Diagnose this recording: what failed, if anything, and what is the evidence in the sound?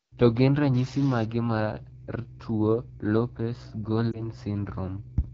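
Codec stage: the whole recording carries AMR wideband (HD Voice) coding with plainly audible damage. Voiced sounds come out rough and raspy rather than clean, which fits the 8.85 kbit/s mode, one of the two lowest AMR-WB rates, where the pulse model has too few bits to track the vocal tract. Unlike packet loss, the roughness is constant, and the top band above 6.4 kHz sounds like hiss rather than detail.

From 0.75 to 1.25 s a distortion rides on the speech, with noise filling the quieter moments. That points to a stuck bit, likely in the converter or its data wiring. One bit held at a fixed value pushes roughly half the samples off by that bit's weight, so the error follows the waveform. Clipping would only flatten peaks and leave the low-level passages clean.

Network stage: at about 4.12 s one 20 ms frame of lost AMR speech frames causes a brief dip or warble. The decoder repeats the last good pitch and vocal tract settings at falling gain, and the speech sounds thin and rough until about 4.27 s as it recovers. 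A single frame gives this short glitch rather than a drawn-out fade. That separates it from a longer burst of loss and from a dropout, which would leave hard silence.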